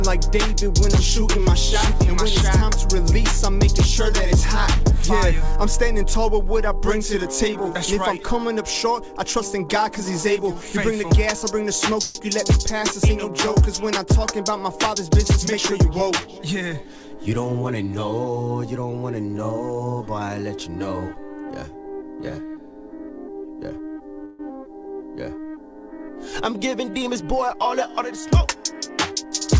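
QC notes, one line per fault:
12.02–12.18 s and 24.25–24.42 s, call audio freeze: packets likely stalled in transit and the jitter buffer ran dry, so the receiver stretched the last sound into a fading buzz for about 131 ms and 140 ms. Playback then resumes where it stopped, adding delay rather than losing audio.
14.77–16.02 s and 26.71–28.98 s, jitter buffer speed-up: a backlog built up in the buffer, and the receiver trimmed it by repeatedly cutting pitch-period-sized slices, roughly 100 ms then 150 ms in total. The sound runs about 8% and 6% fast at unchanged pitch, feeling briefly rushed.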